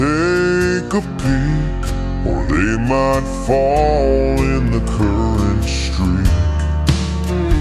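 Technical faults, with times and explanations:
throughout: wrong sample rate. The sound plays at 0.726 times normal speed and 5.55 semitones low, which fits 44.1 kHz audio played back at 32 kHz unconverted. Tempo and pitch fall together by one ratio, unlike time-stretching or pitch-shifting, which alter only one.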